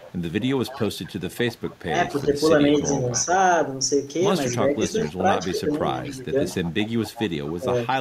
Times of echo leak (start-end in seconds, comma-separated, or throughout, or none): 0.00-2.26, 2.84-3.25, 4.49-7.58